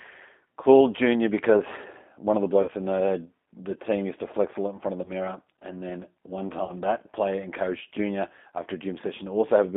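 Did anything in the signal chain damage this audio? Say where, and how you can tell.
Yes. Throughout, the speech sounds slightly rough and synthetic, held inside a 200 Hz to 3.6 kHz line band, with plainly audible codec damage. This is the G.729 codec at the codec stage: each 10 ms frame is rebuilt from a vocal tract filter, a pitch predictor and a few pulses, which fits an 8 kbit/s G.729A stream.

At 2.62 to 2.71 s, 5.04 to 5.12 s and 6.65 to 6.72 s, the speech smears into a fading buzzy tone or coloured noise and stays weak briefly afterwards. This is VoIP packet loss concealed by the speech codec. The network dropped 60, 20 and 40 ms of audio, and the decoder extrapolated from its last pitch and filter with falling gain, then recovered frame by frame.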